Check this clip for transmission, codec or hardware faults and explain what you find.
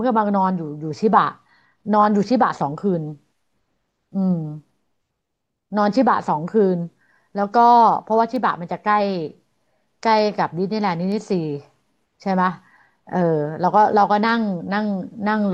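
Two bit error spikes appear in this speech, at 8.36 s and 11.12 s. Each is a single sharp tick: a flipped bit in memory or on a digital link throws one sample (at 8.36 s) or a run of three (at 11.12 s) off by a power of two before the value snaps back. The jumps reach about -18 dBFS and about -24 dBFS respectively, producing broadband clicks with no relation to the surrounding speech.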